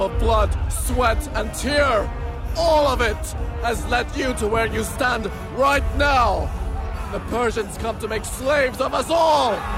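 Nothing in this recording stands out as a technical fault; the sound just runs along steadily without any glitches catching the ear.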